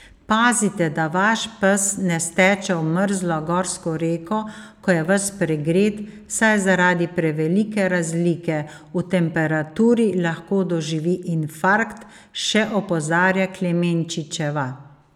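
No technical faults can be heard in the speech, so there are none to describe in time order.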